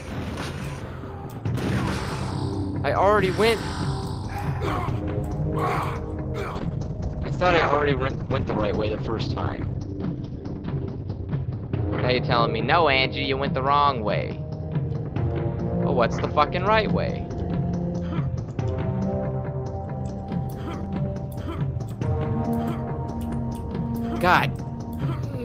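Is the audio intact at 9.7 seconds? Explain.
No. A call bitrate drop spans 6.58 to 20.29 s. The encoder falls from 32 to 8 kbps and cuts highs above 6 kHz, so the sound is coarse and muffled.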